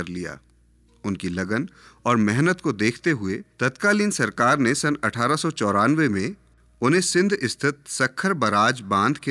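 Speech recording, with nothing technically wrong with it at any point.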